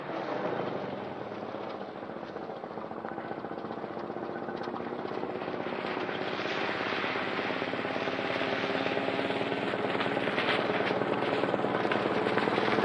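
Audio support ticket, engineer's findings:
Wrong sample rate, throughout. Audio runs slow and sits low, about 6.45 semitones down, at 0.689x speed. This fits material captured at 32 kHz being clocked out at 22 kHz with no resampling. The probable component is the playback or device rate negotiation. Spectrogram: all harmonics and formant bands shifted down by the same ratio, with the top of the spectrum compressed well below normal. Waveform: events stretched in time, with the envelope shape intact but longer.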